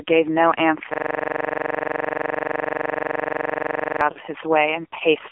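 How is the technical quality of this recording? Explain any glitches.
Quality is poor: the speech sits behind a heavy AMR narrowband mobile codec throughout, a system hang loop freezes most of the middle, and a short lost-frame dropout follows.

AMR narrowband mobile codec: Across the whole clip the speech is confined to a phone band of roughly 300 Hz to 3.4 kHz, and the codec damage is heavy. The buzzy, synthetic timbre points to a low AMR-NB mode around 5.9 kbps, where a coarse vocal-tract model and very few excitation pulses stand in for the real voice. A spectrogram shows a hard ceiling near 3.4 kHz with nothing above it, and smeared, blocky harmonics below.

System hang loop: From 0.94 s to 4.01 s the same 42.67 ms fragment repeats about seventy times. The playback side stalled while the audio hardware kept cycling one ring buffer, and that loop length fits a 2048-sample buffer. The result is a rigid stutter, almost a rough drone, at about 23.4 Hz. 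On the waveform an identical block tiles end to end. On the spectrogram it shows as vertical striping and frozen, comb-like lines.

Lost AMR speech frames: At 4.12 s, for about 40 ms (two lost frames), the decoder had no valid data and extended the last good pitch and spectral settings while lowering the gain. The sound briefly warbles and sags before the speech resumes slightly rough. The waveform shows a short amplitude dip. On the spectrogram the harmonics hold flat and fade for that instant instead of moving.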